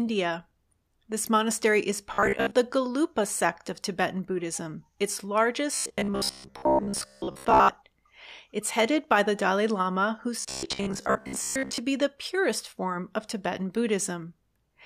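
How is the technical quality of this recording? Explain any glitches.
The recording is marred by three bursts of robotic sound from repeated short buffers, at 2.14–2.51 s (right after "monastery is"), 5.75–7.69 s, and 10.40–11.78 s (just before "be the purest form"). The likely cause is audio arriving too seldom, with playback looping roughly 15 ms fragments in place of most of the real signal. That imposes a rigid 66.7 Hz metallic buzz that only loosely tracks the speech.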